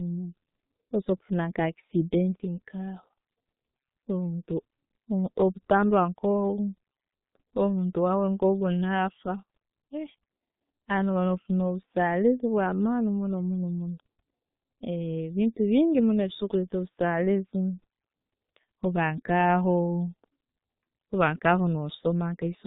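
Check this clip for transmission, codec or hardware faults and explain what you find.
The speech has been squeezed through the G.723.1 codec throughout, with heavy damage. The codec rebuilds the voice from a coarse model in 30 ms frames, at a rate consistent with about 6.3 kbit/s, and discards everything above 4 kHz. The speech comes out muffled and hoarse, and the consonants are smeared.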